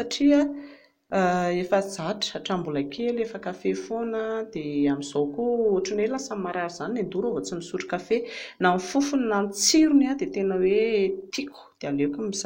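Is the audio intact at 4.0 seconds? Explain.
Yes, at 4.0 seconds the speech plays through cleanly, with no dropout, click, distortion or other fault.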